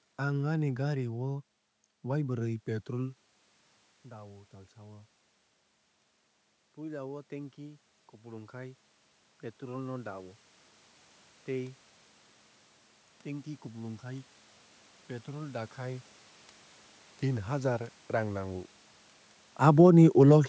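Automatic gain rising runs from 6.75 to 11.85 s in this speech recording. After the input level drops by about 14 dB, the gain control slowly adds about 7 dB, so the voice and the room noise behind it swell together over roughly five seconds. Automatic gain falling follows from 19.53 to 19.98 s, when the input turns too loud and the control pulls its gain down by about 4 dB. The level sinks quickly, carrying the background down with the voice, just after the talker moves around 19 s.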